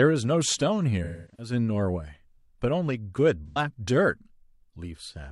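From 1.03 to 1.52 s the speech turns smeared and noisy, then fades toward silence before recovering. This is AAC frame loss with concealment: about 0.3 s of frames went missing within a 0.34 s stretch, mostly as one run of roughly 300 ms. The decoder rebuilt the gap from the last good spectrum and let it decay. A shorter loss at 3.48 to 3.58 s (85 ms) leaves only a brief phasey blur. Unlike a hard dropout, neither gap cuts abruptly to digital silence.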